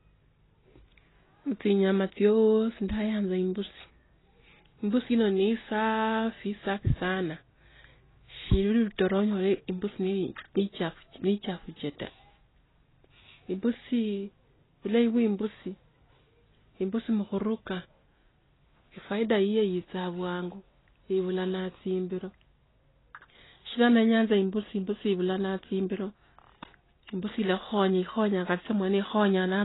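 AAC compression runs throughout: the speech stops near 3.9 kHz and sounds dull and warbly, likely heavy AAC-LC coding at a bitrate around 16 kbps.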